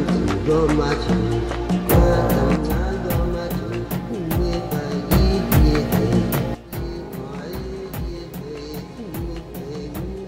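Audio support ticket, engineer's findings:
Sudden gain jump, 2.55–5.11 s (down about 6 dB) and 6.55 s to end (down about 14 dB). Level and noise floor drop together, instantly, no ramp. Likely a digital gain setting or bit shift applied sample-to-sample in the gain stage.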